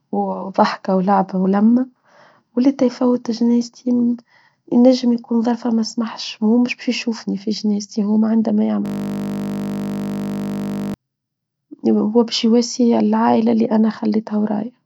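Just after "في جناستي هو عندما", at 8.86 s, the system froze while the sound hardware kept cycling its ring buffer. This system hang loop runs until 10.94 s. A single 20 ms slice repeats over a hundred times, fusing into a steady 50 Hz buzz.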